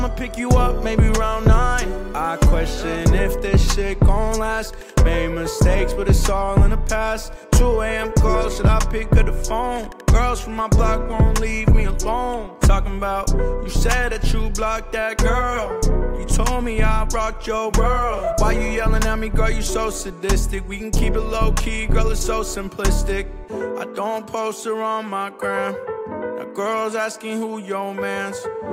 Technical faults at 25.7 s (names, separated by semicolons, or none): none